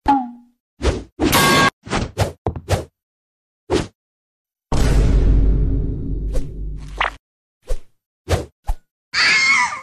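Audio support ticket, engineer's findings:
No audible faults found on review; no dropouts, distortion or timing irregularities to attribute to any component, so no action required on the audio path.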